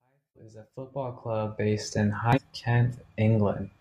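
Speech, rising in a smooth fade from silence at the start to full level by about 1.89 s, is marked by two bursts of damaged data in a compressed stream, from 0.32 to 0.37 s and from 2.33 to 2.39 s. Each time, corrupted frames make the decoder lose sync, so a brief glitch sounds, seen as a smeared broadband smudge or torn waveform.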